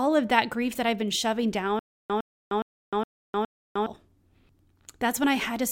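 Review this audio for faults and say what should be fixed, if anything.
From 1.79 to 3.86 s, right after "that I've been shoving", there is a stutter with silent gaps: a 108 ms fragment of speech repeats 5 times, each followed by 306 ms of digital silence, giving an even 414 ms cycle. The likely cause is a playback or stream stall in which each retry replayed the last buffered fragment and then ran dry. The speech that belonged in that span is lost. To prevent it, enlarge the playback buffer and handle underruns without replaying stale data.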